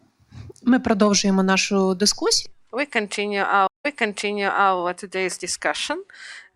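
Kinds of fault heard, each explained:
Stream reconnect: the connection dropped for about 143 ms, then a fresh decoder resumed 0.91 s earlier, replaying sound, unlike a plain dropout, which never repeats.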